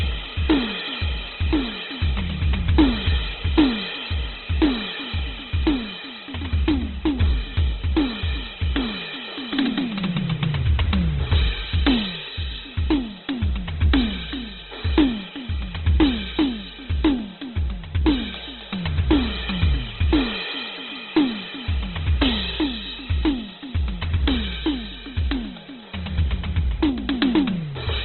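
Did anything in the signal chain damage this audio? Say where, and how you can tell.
Yes, at the codec stage, throughout the music: nothing reaches above 4.2 kHz, and the tones sound rough, grainy and noisy. This is likely Opus compression at a very low bitrate, around 12 kbps, narrowing the bandwidth and filling starved bands with noise.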